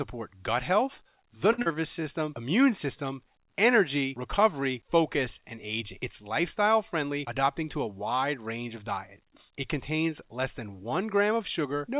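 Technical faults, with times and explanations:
1.52 to 1.60 s, short stall from a late packet: Right after "gut health the", a packet missed its playout time and the jitter buffer emptied. The receiver held the sound going for 58 ms until the packet arrived, then resumed exactly where it had stopped. Nothing is lost, but the sound at that point lingers unnaturally, with a faint buzz or dip where the stretched material stands in for the real signal. The added 58 ms also pushes everything after it later.
1.62 to 1.68 s, short concealed packet loss: Just after the stall, 80 ms of audio never reached the decoder in time. The receiver bridged the gap with 37 ms of synthesized continuation, extending the pitch of voiced sound or shaping noise for unvoiced parts, then crossfaded back into the real signal. The result is a brief smear or wobble, and because the fill is shorter than the hole, some of that stretch of speech is missing and playback jumps roughly 40 ms ahead.
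1.72 to 2.05 s, jitter buffer slow-down: With the buffer running low, the receiver rebuilt its reserve by repeating single pitch periods and small slices of pause many times over, adding 45 ms in total. Speech here runs at about 89% speed with unchanged pitch, so the audio between "gut health the" and "immune system energy recovery" sounds drawn out.
7.02 to 7.83 s, jitter buffer speed-up: The buffer held more audio than its target, so the receiver trimmed it by cutting out short fragments of one or a few pitch periods in quick succession, removing somewhere near 70 ms. Just before "wide range of diets", the speech runs at about 107% speed with the pitch unchanged, giving that stretch a slightly hurried, clipped pace.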